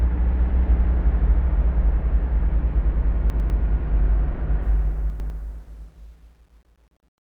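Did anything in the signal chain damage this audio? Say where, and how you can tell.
Yes. There are chunks out of order in the buffer or driver stage, at 3.3–3.5 s and again at 5.1–5.3 s. In each spot one 100 ms block plays one slot late, so the sound briefly jumbles, with three hard joins. This pattern fits a 100 ms buffering scheme.

The fade-out starting around 4.6 s shows truncation distortion from a gain or sample-format stage without dither. From 4.62 s the tail turns gritty, and from 5.62 s to the end it is at its worst. This sound fits roughly 9-bit resolution during the fade.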